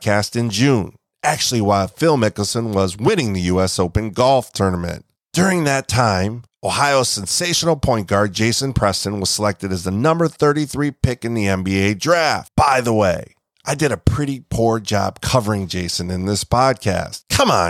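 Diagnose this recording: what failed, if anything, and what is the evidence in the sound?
Nothing failed here: the speech comes across without any break, glitch or damage that would point to a problem at any stage of the chain.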